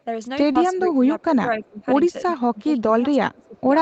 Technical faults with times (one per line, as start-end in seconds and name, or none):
0.51-0.58 short concealed packet loss
0.69-1.85 speech suppressed in double talk
1.53-1.68 echo leak
2.21-2.26 speech suppressed in double talk
2.52-3.67 speech suppressed in double talk
3.32-3.60 echo leak